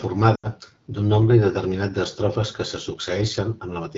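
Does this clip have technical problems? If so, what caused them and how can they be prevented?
Yes. AMR wideband (HD Voice) codec, throughout: the speech sounds rough and raspy, which points to one of AMR-WB's lowest rates, around 8.85 kbit/s. Prevent it by negotiating 12.65 kbit/s or higher.

Lost AMR speech frames, 0.36 to 0.47 s: about 80 ms drops out, fitting four frames. The decoder repeats the last pitch and tract settings while fading to silence. Prevent it with better radio coverage or stronger error protection.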